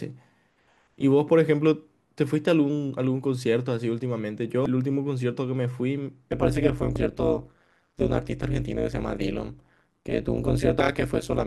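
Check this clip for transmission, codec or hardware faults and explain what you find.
Two faults are present: damaged data in a compressed stream, and overlap-add ripple.

Damaged data in a compressed stream shows up at 4.66, 6.96 and 10.80 s. Corrupted bytes stop the decoder from reading those frames. It loses sync and hunts for the next frame header. Each spot is a very brief blip.

Overlap-add ripple runs from 6.32 s to the end. The speech was split into windowed frames and rejoined with an overlap that doesn't sum evenly. The level swings by about 60 dB around 150 times a second. It sounds like a harsh, robotic buzz.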